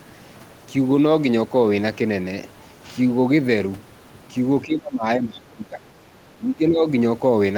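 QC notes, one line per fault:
4.65–5.95 s, speech suppressed in double talk: the speech sinks by as much as about 20 dB, for about a second in total. This is likely an echo canceller that heard two people talking at once, could not separate the near talker from the loudspeaker's echo, and attenuated everything.
6.38–6.87 s, speech suppressed in double talk: a milder dip of about 10 dB across roughly 0.4 s, likely from the same gating.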